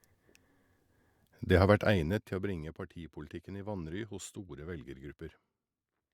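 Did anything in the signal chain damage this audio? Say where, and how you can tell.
No, nothing in the signal chain damaged this audio.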